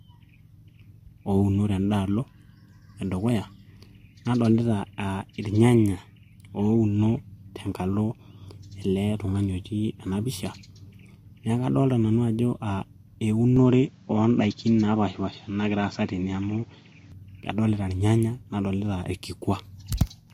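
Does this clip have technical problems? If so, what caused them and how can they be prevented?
Yes. From 13.57 to 17.12 s the speech loses everything above 7.6 kHz and gains a new noise floor roughly 40 dB down, likely an input switched to a poorer device. Lock the recording input to one device and disable automatic switching to headset or alternative microphones.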